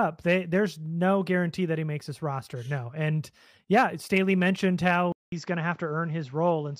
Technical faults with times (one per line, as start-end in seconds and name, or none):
5.12-6.79 input switched to a poorer device